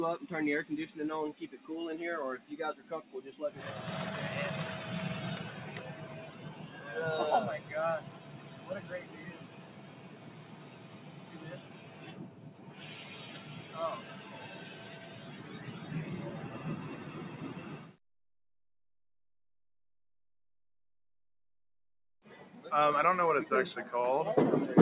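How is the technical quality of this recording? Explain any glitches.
The recording has a noise-suppression fault in two stretches, and nothing above 4 kHz survives the narrowband call codec path, which sounds like G.711 A-law at 64 kbps. Sound cut by the noise suppressor, 9.45 to 11.38 s and 11.58 to 12.01 s: the suppressor mistook the sound for noise, dipping it by about 5 dB and about 4 dB.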